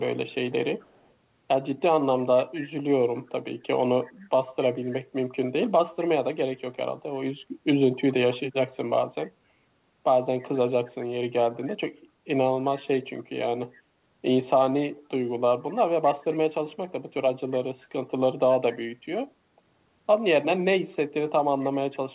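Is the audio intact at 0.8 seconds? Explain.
No. An echo leak runs from 0.79 to 1.11 s. A faint copy of the speech returns about 259 ms late, very quiet beneath the direct sound. The likely cause is a far-end loudspeaker whose echo canceller let part of the microphone pickup back into the call.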